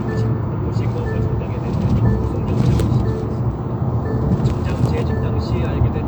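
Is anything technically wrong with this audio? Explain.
No, nothing in the audio points to a technical fault.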